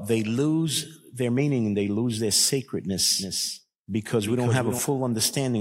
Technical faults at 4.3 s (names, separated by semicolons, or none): doubled audio track